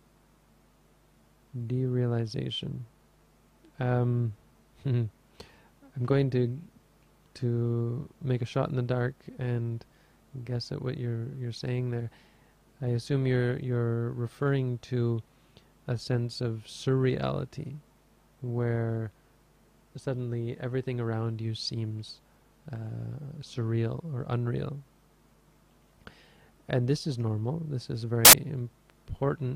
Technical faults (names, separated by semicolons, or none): samples built from the wrong bytes